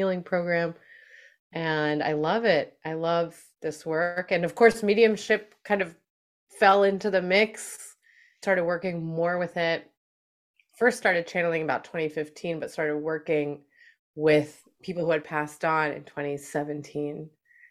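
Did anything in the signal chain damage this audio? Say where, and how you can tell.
No, nothing in the chain audibly damaged this speech.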